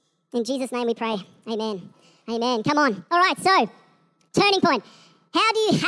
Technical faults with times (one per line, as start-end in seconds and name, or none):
0.00-5.88 wrong sample rate